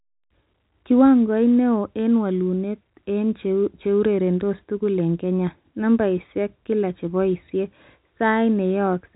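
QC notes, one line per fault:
No faults are present: the speech carries the normal G.711 telephone coding band limit, with nothing above about 3.9 kHz, which fits a 64 kbps A-law line, and at most a faint coding noise that follows the signal level.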